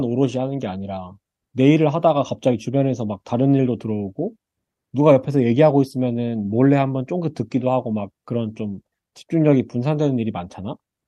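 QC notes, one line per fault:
Throughout, clock drift between sender and receiver: the sender runs around 4 percent fast, so the receiver's buffer keeps overfilling, a one-way trend unlike random network jitter.
0.17–11.02 s, repeated timing corrections: the receiver trims short pieces to keep pace with 104% speed, heard as small, unevenly spaced hiccups, all cuts rather than loss gaps.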